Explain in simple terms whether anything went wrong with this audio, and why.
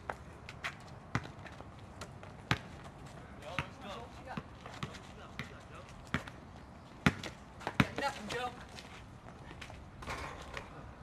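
Nothing went wrong with this audio that a listener can pick out. No moment in the clip stands out as a technical problem, so there is nothing here that needs explaining.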